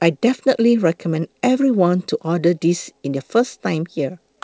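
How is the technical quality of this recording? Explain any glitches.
The speech has a recurring timing problem that runs almost the entire length, caused by a clock mismatch between the two ends of the call. The call codec, which sounds like G.722, band-limits everything to 8 kHz.

Clock drift between sender and receiver affects the whole clip. The sender's clock runs fast, by around five percent, so audio arrives slightly quicker than the receiver plays it out. The jitter buffer therefore keeps overfilling. Unlike packet loss, which produces isolated gaps or smeared concealment at random points, this is a steady, one-directional imbalance with no silent dropouts.

Repeated timing corrections run from 0.06 s to 4.37 s, with the material arriving at 105% speed. To drain the surplus, the receiver repeatedly discards short slices of audio at uneven intervals. Each cut is small and is heard, if at all, as a faint hiccup or a slightly hurried, lurching rhythm in the speech. 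Because every edit removes rather than stretches material, the effect differs from time-stretching artefacts, which sound smoother but slightly warbly.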